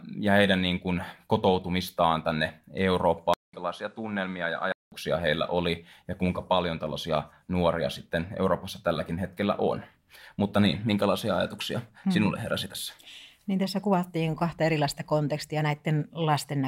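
From 3.34 to 4.92 s the speech drops out for about 0.2 s, then returns about 5 dB quieter with nothing above 11.4 kHz and a new noise floor around 40 dB down, before "heillä oli ja kuinka". The likely cause is an input switched to a poorer device.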